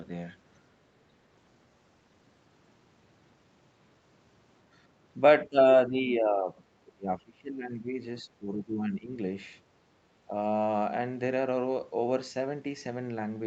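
Speech with three dips, at 5.45–5.58 s, 5.87–7.99 s and 8.22–9.16 s, dropping up to about 30 dB. This is likely speech suppressed in double talk, with the echo canceller muting the talker as well. The waveform shows sunken, gappy stretches, and the spectrogram shows faded energy below the 8 kHz call bandwidth.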